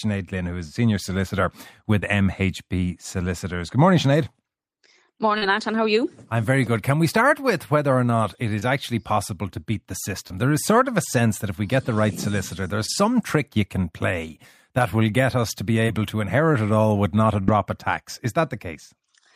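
Through most of the clip there's short concealed packet loss, at 1.99, 5.38, 8.59, 10.27, 12.86 and 15.86 s. Each time, a slice of the speech didn't arrive in time, about 20 ms at most of these and 40 ms at 5.38 s. The decoder papered over it by extending whatever sound came just before, then eased back into the real signal. You hear a quick smear or wobble, and a brief consonant can drop out.

Near the end, from 17.41 to 17.50 s, there's a burst of packet loss, with about 60 ms gone in one go. The receiver stretches the last sound across the gap while fading it down, so you get a held buzz or dying hiss. Then the speech picks up again further along, with that stretch simply missing.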